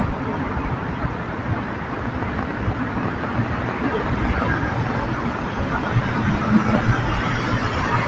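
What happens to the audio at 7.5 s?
At 7.5 s the sound is still under the noise suppressor applied to music or sounds, a fault that runs through the whole clip. A suppressor tuned for speech treats sustained tones, ambience and decay tails as noise and pulls them down by a few decibels, while transients pass. Here held parts and tails sink and recover in a pumping, fluttering way, leaving the sound thinner. Band-limiting near 8 kHz is also present, from the call path.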